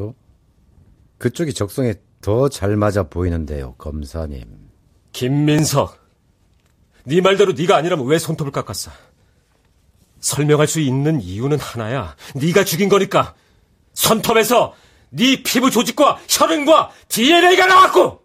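At 5.59 s the speech has a dropped buffer (overrun): the sound jumps forward with no pause at all. The cause is likely that the program read its input too late and the hardware wrote over a tiny slice, roughly a millisecond or two, so the audio on either side is butted together. An underrun leaves a brief silent gap. Here nothing is inserted; the waveform simply skips ahead.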